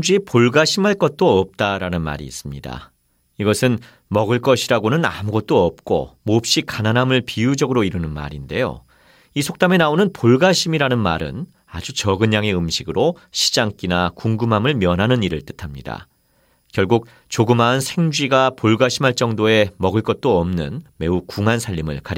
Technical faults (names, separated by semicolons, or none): none